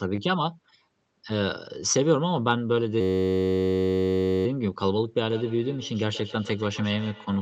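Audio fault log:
3.01–4.46 s, system hang loop: the speech freezes into a steady buzz near 94 Hz as one 10.67 ms fragment repeats exactly about 136 times. That loop length fits a 512-sample ring buffer that the audio hardware kept replaying while the driver or system was stalled.
5.19–7.41 s, feedback echo between two devices: each phrase returns roughly every 150 ms, thinner and more ringing on each pass, peaking about 15 dB below the speech. A second device in the room is replaying this microphone's signal, which the local echo canceller cannot remove.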